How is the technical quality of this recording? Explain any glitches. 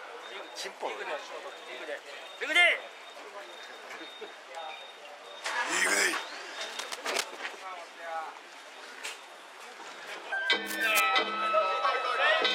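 The recording has two short bursts of cable scratch noise, from 6.69 to 7.40 s and from 10.67 to 11.06 s. Each is a dense, uneven scratching only a little quieter than the sound itself. A worn cable or connector being moved is the likely cause, with its contact resistance changing rapidly.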